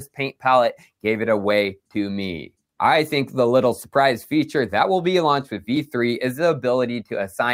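Between 0.07 and 0.44 s, the noise suppressor cut sound it mistook for noise, pulling it down by about 18 dB over roughly 150 ms. The waveform shows a sudden envelope dip, and the spectrogram shows energy thinning across bands.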